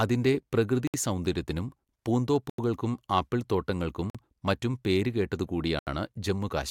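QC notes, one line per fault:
0.87 to 0.94 s, 2.50 to 2.59 s, 4.10 to 4.15 s and 5.79 to 5.87 s, Bluetooth stall: the speech drops to dead silence for 66, 88, 48 and 79 ms, then resumes where it stopped, likely because interference delayed packets until the headphone buffer ran empty and playback waited for retransmissions. On the waveform each gap is a flat near-silent strip with abrupt edges. On the spectrogram it is a clean vertical blank band across all frequencies.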